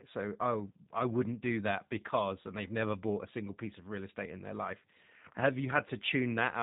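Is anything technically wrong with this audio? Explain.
Yes. The G.729 codec colours the whole speech clip, and the damage is plainly audible. This low-rate VoIP coder, here the G.729A variant, does not send the waveform itself. Each 10 ms frame is rebuilt from a vocal tract filter, a pitch predictor and a handful of pulses, which fits an 8 kbit/s stream. Nothing above 4 kHz survives, so the speech sounds band-limited and muffled, with a rough, slightly synthetic texture throughout.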